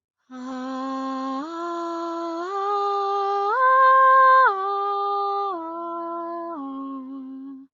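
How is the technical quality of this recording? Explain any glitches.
No glitches; the music comes through intact.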